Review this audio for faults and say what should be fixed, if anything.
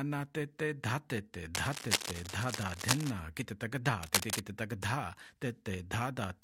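A worn or loose cable or connector was likely being moved, its contact resistance jumping around and causing cable scratch noise: dense, ragged scratching at roughly the level of the sound itself, from 1.54 to 3.11 s and 4.03 to 4.42 s. Replace or reseat the cable and secure it so it cannot shift during recording.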